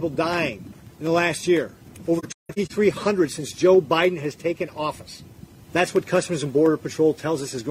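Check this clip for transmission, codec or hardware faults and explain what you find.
One fault: AAC frame loss with muting, between 2.18 and 2.72 s. About 0.3 s of audio vanishes in several short gaps, the longest around 150 ms, which points to roughly seven lost frames. The decoder zeroes each missing spectrum, and window overlap fades the sound out and back, leaving soft-edged holes.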